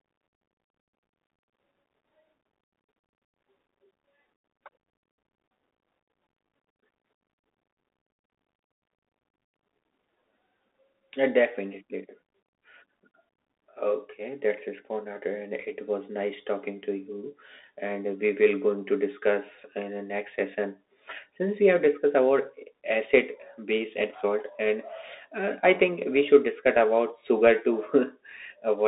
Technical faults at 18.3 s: Bluetooth CVSD headset codec

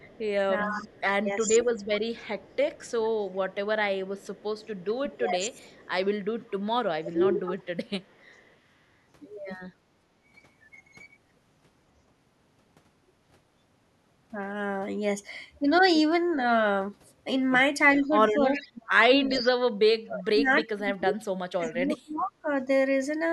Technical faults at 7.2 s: speech suppressed in double talk

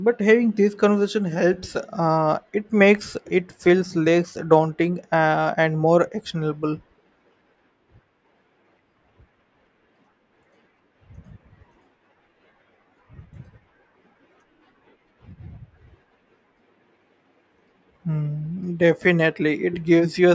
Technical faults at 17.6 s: none

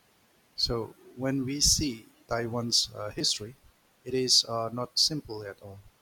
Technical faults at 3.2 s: repeated buffer

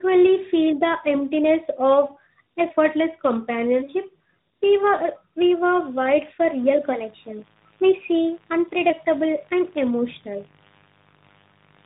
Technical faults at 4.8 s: tandem speech coding

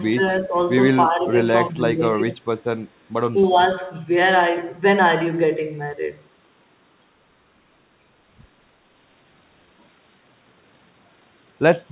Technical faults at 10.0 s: none

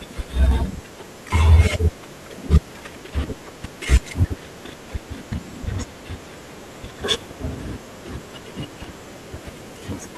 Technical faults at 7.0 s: damaged data in a compressed stream

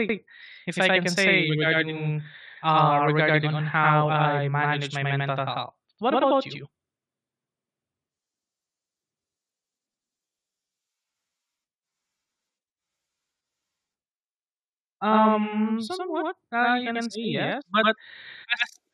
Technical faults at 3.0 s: channel delay (doubling)

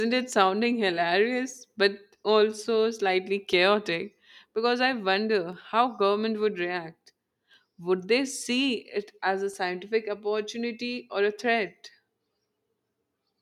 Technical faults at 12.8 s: none

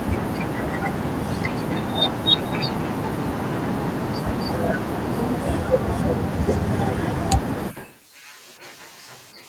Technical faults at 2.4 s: none

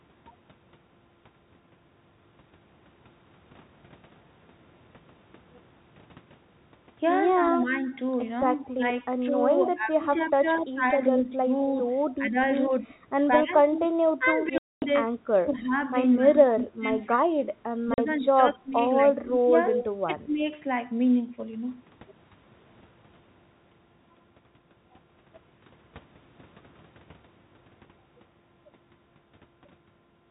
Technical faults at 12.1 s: echo leak; speech suppressed in double talk

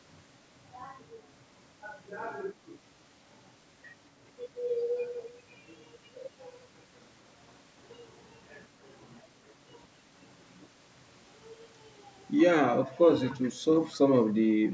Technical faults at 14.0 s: echo leak

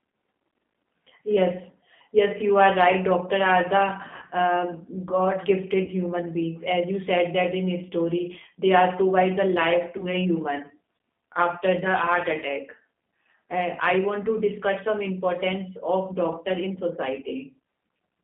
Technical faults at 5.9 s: G.729 codec; VoIP packet loss concealed by the speech codec

